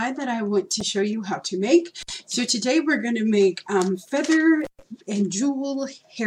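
At 0.80 s, damaged data in the compressed stream throws the decoder off its frames, so it resyncs at the next header, leaving a brief glitch. An intermittent contact then opens the line twice: for about 56 ms at 2.01 s and for about 121 ms at 4.62 s, each time dropping the sound to faint hiss with crackle at both edges.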